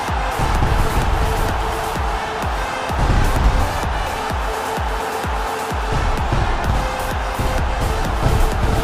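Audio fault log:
Nothing stood out on listening.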